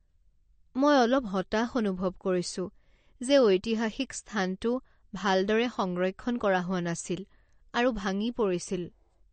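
Throughout, the speech carries plainly audible MP3 compression, likely from a low bitrate near 40 kbps: weak detail swirls in and out watery.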